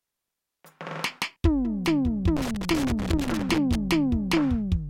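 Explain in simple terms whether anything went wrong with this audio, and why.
Loose connector crackle runs from 2.37 to 3.75 seconds in this music. A worn or dirty plug contact keeps touching and separating as it shifts, so the signal cuts in and out very fast, producing an uneven burst of scratchy crackling.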